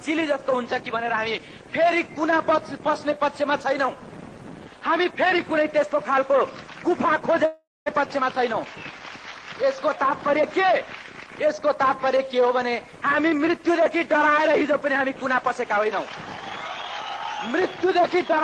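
From 7.45 to 7.90 s the sound freezes into a fading buzz, then about 0.21 s of near-silence, before resuming with roughly 0.4 s missing. This is likely a long network dropout. Unlike a brief packet-loss glitch, the concealment runs out, and the audio jumps ahead.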